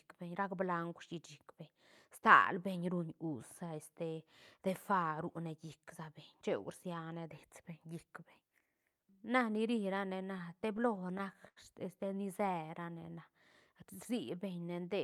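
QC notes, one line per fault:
9.95–11.58 s, repeated stalls (stutter): Twelve times the buffer ran dry, the longest for 83 ms. The receiver stretched the last sound, so speech drags.
12.41–13.07 s, jitter buffer slow-down: Repeated pitch periods added 58 ms. Speech plays at 92% speed, same pitch, sounding drawn out while the buffer refills.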